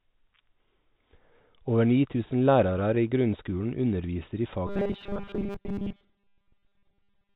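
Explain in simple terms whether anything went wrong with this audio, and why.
Between 2.26 and 3.54 s, about ten small pieces of audio were lost and patched over, causing scattered short gaps, heard as brief ticks and hiccups.

From 4.67 s to the end, new audio likely arrived too seldom, so tiny 5 ms pieces kept repeating. This is robotic sound from repeated short buffers: a rigid, metallic 200 Hz buzz.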